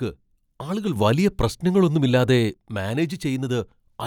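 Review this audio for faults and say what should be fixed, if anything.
At 0.96 s the speech and the background noise step up together by about 6 dB, hold at that higher level, then drop back at 2.54 s. This is a sudden gain jump. The likely cause is a digital gain setting applied instantly, from one sample to the next, rather than eased in over time, so both edges change level abruptly. To prevent it, ramp every gain change smoothly over several milliseconds instead of switching it in a single sample.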